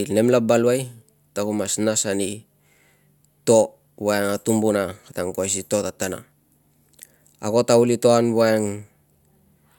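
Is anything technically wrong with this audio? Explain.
No, nothing technically wrong.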